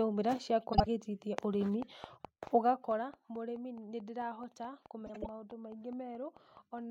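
At 0.73 s, frames out of order: two adjacent blocks of about 52 ms, which fits runs of two frames, were decoded swapped, so 0.73 to 0.87 s plays with its halves exchanged. It sounds like a brief garbled flutter. No time is lost.

From 1.82 s to 6.79 s a train of clicks runs at a regular 4.6 per second, about twenty in all. They are similar-shaped pops peaking roughly 5 dB above the signal and ticking through the pauses too. Their likely source is electrical interference or a faulty connection or power supply.

At 5.06 s, frames out of order recurs. Two blocks of about 78 ms, consistent with three-frame runs, are exchanged across 5.06 to 5.27 s. This gives a longer scrambled flutter.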